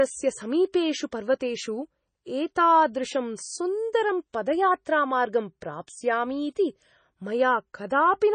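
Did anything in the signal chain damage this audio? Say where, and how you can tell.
Yes. Throughout, the speech sounds watery and swirly, with nothing above 9 kHz, which is likely heavy MP3 compression at the codec stage, near 24 kbps. A simple low-pass filter would not swirl.

Pre-echo at 4.33 s: a brief hiss, about 11 ms, comes before an attack because block-spread quantisation noise leaks ahead of it. Reverb would trail the attack instead.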